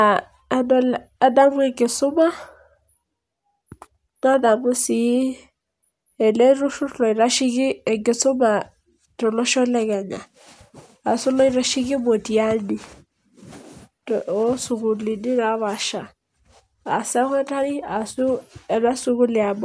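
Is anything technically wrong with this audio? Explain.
No, nothing technically wrong can be heard in this speech recording. There is no fault to point to at any moment in it.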